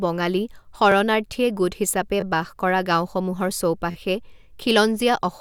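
Speech with three repeated-buffer stutters: one extra play of a short chunk at 0.92 s, two extra plays from 2.21 to 2.23 s, and three from 3.91 to 3.95 s. Each chunk lasts about 11.6 ms, which fits a 512-sample buffer that the device replayed when fresh audio arrived late. With a buffer this small, each is heard as a click or brief buzz. A waveform shows identical segments butted together with abrupt joins, and a spectrogram shows thin vertical lines at each seam.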